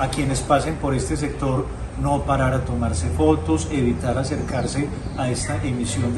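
Steady ticking from 4.41 to 5.35 s: a train of clicks at 10.8 per second, about ten pops peaking about 5 dB above the sound, likely nearby-equipment interference.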